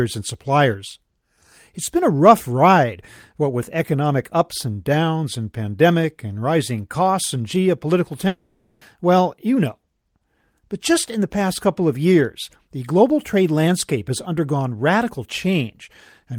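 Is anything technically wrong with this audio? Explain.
Yes. A long network dropout runs from 8.27 to 8.83 s, right after "rising costs and geopolitical". The likely cause is audio failing to arrive, so the receiver stretches the last sound into a fading buzz for about 540 ms, then resumes with that stretch of speech missing.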